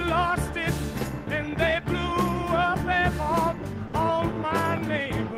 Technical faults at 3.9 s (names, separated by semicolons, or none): sound dropped by the voice detector